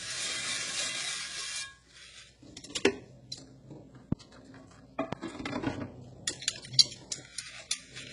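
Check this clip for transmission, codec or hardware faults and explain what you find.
Two faults are audible: codec damage throughout, and two loud pops.

The whole clip carries heavy damage from what is likely HE-AAC compression. Rebuilt treble sounds gritty and metallic, nothing survives above 11.1 kHz, and the texture fits a very low bitrate near 12 kbps.

A loud pop hits at 4.12–4.15 s and again at 5.13–5.15 s. Each is a single sharp burst, roughly 20 dB above the sound, which continues underneath. A sudden voltage step is the likely cause.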